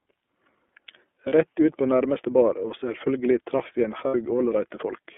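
Throughout, the speech carries the sound of the iLBC codec. The band stops near 250 Hz and 3.4 kHz, so it sounds thin and narrowband. Each frame is coded on its own. Voices come out clear but a bit rough and synthetic, which fits the 30 ms mode at about 13 kbps.

At 1.29 to 1.33 s, there are lost iLBC frames. About 30 ms is missing, which fits one dropped packet. The decoder repeats the last pitch cycle with added noise, and this is heard as a brief buzzy held vowel. At 4.08 to 4.15 s, a second, longer gap of about 60 ms follows, which fits two lost frames. Both times, the speech recovers almost at once.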